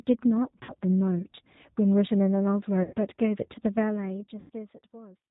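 Throughout, the speech carries the plainly audible roughness of the G.729 codec. Nothing above 4 kHz survives, and each 10 ms frame is rebuilt from a vocal tract filter, pitch predictor and sparse pulses. That gives a synthetic grain that simple band-limiting, which stays smooth, would not.

VoIP packet loss concealed by the speech codec occurs at 0.63–0.73 s, 2.83–2.95 s and 4.40–4.50 s, covering about 60, 100 and 100 ms of lost audio. Instead of a silent gap or click, the decoder stretches its last sound into a fading buzzy tone or coloured noise, and the speech stays weak briefly afterwards.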